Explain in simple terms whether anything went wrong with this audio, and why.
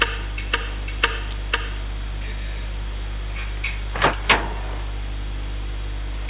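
Nothing went wrong here: the sound just came through an ordinary phone-style call line that carries nothing above 4 kHz, so it has that familiar narrow telephone character, which is simply how that kind of line works.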